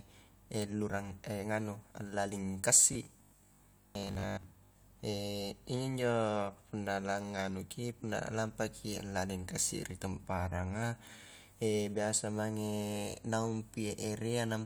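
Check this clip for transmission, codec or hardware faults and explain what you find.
One fault is audible. From 2.93 to 4.87 s there is robotic sound from repeated short buffers: a rigid 50 Hz buzz, likely from about half the audio being replaced by looped 20 ms buffers.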